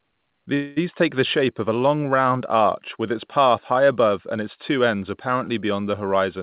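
Speech, carried over a narrowband call path with nothing above 4 kHz, consistent with G.711 A-law at 64 kbps. From 0.54 to 0.79 s there's a call audio freeze, likely from delayed packets draining the jitter buffer. The last sound is stretched into a fading buzz or hiss for about 225 ms, then speech resumes where it stopped, nothing lost, just shifted later.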